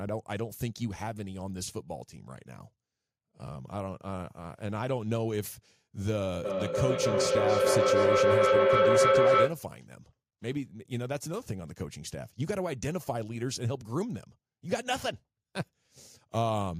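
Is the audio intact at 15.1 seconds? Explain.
Yes, at 15.1 seconds the speech runs cleanly, with no dropout, click, distortion or other audible fault at that point.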